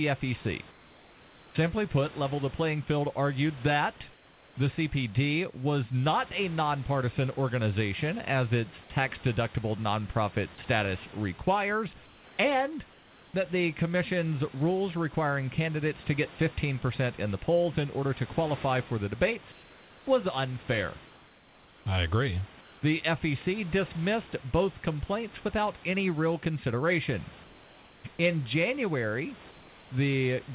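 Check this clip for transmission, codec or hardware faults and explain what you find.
There's one recurring fault, comfort noise in place of the background, over a narrowband call path with nothing above 4 kHz, which fits G.711.

It shows up at 0.71–1.55, 4.13–4.55, 12.05–12.38, 12.92–13.34, 19.52–20.06, 22.61–22.82, 27.44–28.04 and 29.51–29.9 s, in gaps lasting 0.21 to 0.84 s. The room background flattens into a smooth, featureless hiss, about 2 to 3 dB quieter. Likely cause: discontinuous transmission, where the sender goes silent in the pauses and the receiver fills them with synthetic noise.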